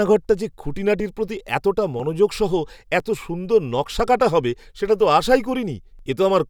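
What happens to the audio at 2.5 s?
Periodic USB or driver dropouts run from 1.0 s to 6.0 s, so 2.5 s falls inside that stretch, midway between two of the losses. About once a second, something blocks the audio driver or USB bus, and a few milliseconds of speech are skipped outright rather than filled with silence. Each skip splices the waveform together abruptly, giving a short tick, and the roughly seven evenly spaced ticks are audible only while speech is present.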